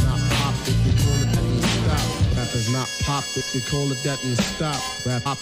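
Damaged data in a compressed stream twice throws the decoder off its frames, so it misreads the bad bytes and hunts for the next valid frame header. Each break comes through as a short glitch, at 1.35–1.37 s and again at 5.25–5.27 s.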